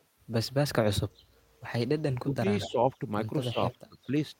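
From 2.13 to 2.43 s the speech sinks by roughly 25 dB, likely speech suppressed in double talk, with an echo canceller ducking the near talker while the far side spoke. A waveform shows the envelope collapsing. From 2.6 to 2.71 s a copy of the speech returns 220 ms late, around 10 dB below it. This is likely an echo leak from a loudspeaker-side canceller, visible as a smeared, displaced repeat of earlier harmonics. Overlapping it, 2.67 to 2.95 s dips about 10 dB, then 3.52 to 3.59 s about 15 dB and 3.89 to 4.14 s about 25 dB, each another brief notch in the envelope.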